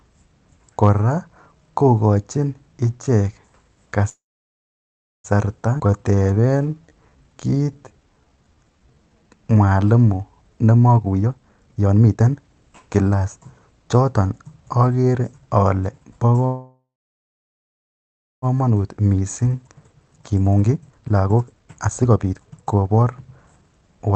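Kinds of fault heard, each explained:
call audio freeze: At 4.09 to 5.27 s and 16.46 to 18.45 s, likely from delayed packets draining the jitter buffer, the last sound trails off into about 1.0 s and 1.6 s of silence, then resumes intact.
skip ahead: At 5.78 s, roughly 0.7 s of speech is dropped and playback jumps forward, with both sides joined almost directly.
jitter buffer slow-down: From 5.87 to 9.70 s the receiver repeats pitch periods, adding about 0.6 s, so speech runs at 85% speed, drawn out but at unchanged pitch.
jitter buffer speed-up: At 10.69 to 13.66 s and 18.52 to 24.09 s, short pitch-period pieces are cut, roughly 1 s and 2 s in total, so speech sounds hurried at 139% and 135% speed.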